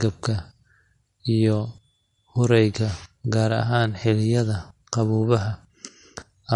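Throughout, the speech stops at 11.8 kHz and carries layered coding artefacts, which fits an MP3 re-encoded as AAC-LC: likely transcoding between lossy codecs.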